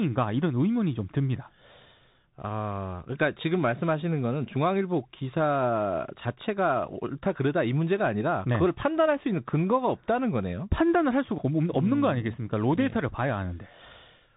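Throughout, the speech is muffled and scratchy over granular hiss, with nothing above 3.8 kHz: the Bluetooth CVSD headset codec's coarse one-bit steps.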